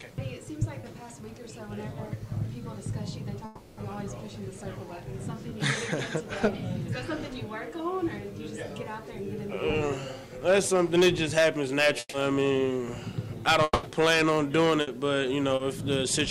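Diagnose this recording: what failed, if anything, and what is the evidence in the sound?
The network is dropping packets, and short concealed packet loss shows up at 0.81–0.85 s, 5.49–5.53 s and 15.55–15.61 s. The receiver bridged each gap of 20, 20 and 40 ms by carrying the previous sound forward and blending back, so you get a quick smear where that bit of audio went missing.

At 3.45–3.79 s there's a 320 ms hole filled entirely with continued sound and no silence. At 13.63–13.85 s, 200 ms is filled and ends in about 20 ms of silence before the audio picks up later. A long network dropout is the likely cause.

There's also a burst of packet loss at 11.99–12.15 s, where 140 ms is patched with extended sound that dies into about 30 ms of silence, and again at 14.81–14.89 s with a 60 ms patch. In both cases the concealment is held and turned down, then the real audio resumes further along with the middle gone.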